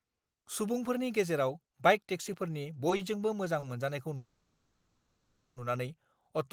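Short stalls from late packets occur at 2.96 s and again at 3.59 s. Each time a packet missed its playout moment, the jitter buffer ran dry, and the receiver held the last sound for about 30 ms before the packet arrived and playback resumed from the same point. Nothing of the speech is lost, but each spot has a briefly smeared, drawn-out sound, and the stream ends up about 30 ms later each time.

A call audio freeze runs from 4.16 s to 5.59 s, with the speech stopping for 1.4 s. The buffer emptied, most likely because packets were held up in transit, and the receiver extended the last sound as a fading buzz or hiss that gives way to roughly a second of silence. When the packets finally land, the speech continues exactly where it stopped, so a 1.4 s gap has been inserted rather than anything removed, and the rest of the clip is delayed by that amount.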